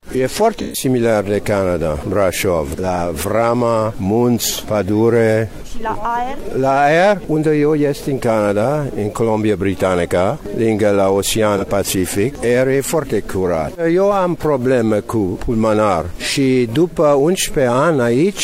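The audio carries a grainy, signal-following distortion throughout. Quiet passages turn gritty, and the faintest sounds sputter or drop out rather than sinking into a smooth noise floor. This is likely low bit depth without dither, consistent with an 8-bit signal rounded to its nearest step, which leaves an error around 40 dB below the signal. A zoomed waveform would show visible staircase steps in quiet stretches, and a spectrogram would show a speckled floor that rises and falls with the sound instead of sitting flat.

AAC frame loss with concealment appears three times: from 0.59 to 0.84 s, about a quarter second, where three frames totalling about 128 ms were lost; then at 11.57 to 11.64 s and 16.90 to 16.96 s, each brief enough to fit a single frame. In each gap the decoder patched in a reconstruction from the last good spectrum, so these spots sound smeared and phasey. On a spectrogram they show as short blocks of blurred, frozen-looking energy with sharp frame-edged boundaries.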